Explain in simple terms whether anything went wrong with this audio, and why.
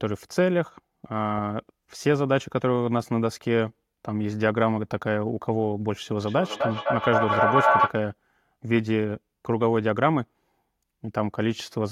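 From 6.27 to 7.99 s the speech is caught in a feedback echo between two devices: one device replays the other's microphone, which picks it up again. Unlike room reverberation, each sound returns at a steady gap of about a third of a second, and the repeats build until they are louder than the speech.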